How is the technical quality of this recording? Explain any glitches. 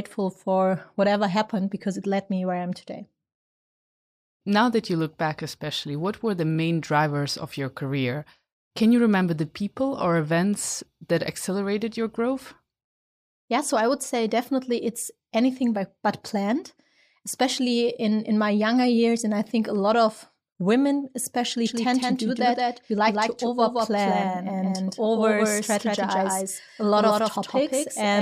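The recording has one clear glitch. From 21.66 s, just after "lot of women especially", to the end, a doubled audio track appears. The signal was likely captured twice, through a slower second path, so a dry, full-band copy roughly 150 ms late and about 5 dB quieter sits under the speech. It cuts in abruptly and gives a hard, slapback echo with no room decay.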